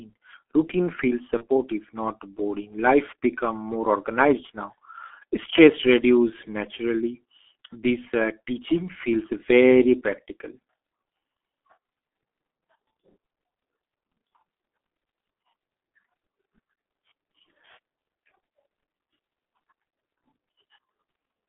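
Throughout the clip the speech is heavily coloured by the G.723.1 codec. The band stops near 300 Hz and 3.5 kHz, and the voice is hoarse and muffled with smeared consonants. The sluggish, grainy quality points to a 6 kbit/s-class coder rather than plain band-limiting.

From 1.37 to 1.45 s, right after "routine feels", VoIP packet loss concealed by the speech codec stretches the sound into a fading buzzy tone or coloured noise. This fits one lost 30 ms frame. Unlike a clean dropout, the gap is filled rather than silent, and the voice stays weak briefly afterwards.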